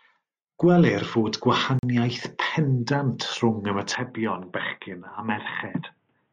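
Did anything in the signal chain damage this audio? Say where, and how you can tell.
Yes. At 1.79 s the speech cuts out for about 42 ms of hard-edged silence and resumes at 1.83 s with nothing missing. This is a gap between stream segments: timestamps on adjacent 2.0 s segments left a hole that playback filled with silence.

From 3.95 s to the end, the speech turns dull and boxy with no pause at the changeover. Nothing remains above 3.8 kHz, the level drops a few decibels, and a faint new noise floor appears. The likely cause is the input being switched to a poorer device at the driver stage.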